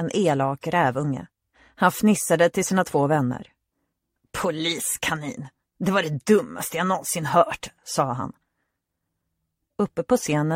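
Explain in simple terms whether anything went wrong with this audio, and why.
Nothing went wrong here: there are no dropouts, glitches or other technical faults anywhere in this audio.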